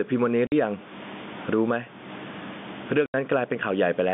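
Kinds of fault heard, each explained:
Gain pumping: The level swings by around 15 dB throughout. Loud and soft parts sit squashed close together. The likely cause is input gain set far too high, driving a fast limiter.
Packet loss filled with silence: The sound cuts to dead silence twice, from 0.47 to 0.52 s and from 3.06 to 3.14 s. These holes last 50 ms and 80 ms, which fits lost 10 ms packets.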